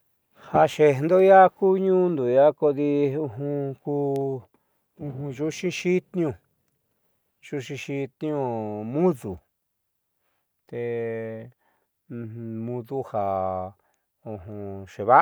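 No technical faults are audible.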